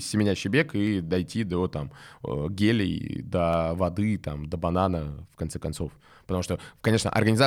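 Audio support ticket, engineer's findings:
Single sharp clicks at 0.87 s (after "семенящий бег"), 3.53 s (before "воды там до банана") and 6.52 s. Dropped samples, likely: a fraction of a millisecond missing from the stream, so the waveform jumps to a later value, giving a thin vertical line across the spectrum.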